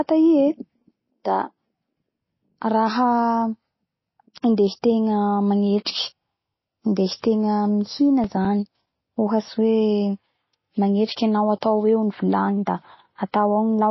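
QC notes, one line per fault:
Throughout: MP3 compression, likely cause; plainly audible watery, swirling smear, with a spectrogram showing nothing above 5.8 kHz and flickering patches, which fits about 24 kbps.
7.83–9.48 s: CD scratch ticks; nine regular ticks, about five per second, the longest near 7 ms, visible as thin vertical spikes or brief gaps in the waveform.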